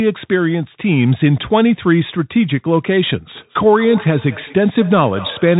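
A speech recording passed through a Bluetooth CVSD headset codec from start to finish, a one-bit delta coder whose step size adapts and which fits a 64 kbps headset link. It removes everything above 3.8 kHz, leaving the speech narrow and muffled, and the damage is plainly audible: s sounds come out scratchy, loud bright moments distort where the step cannot keep up, and a granular hiss sits underneath. From 3.35 s to the end, a feedback echo between two devices sets in, with a second device in the same room replaying the call so that the first microphone picks it up again. Each stretch of speech returns roughly every fifth of a second as a thinner, ringing repeat, peaking at about 17 dB below the direct speech.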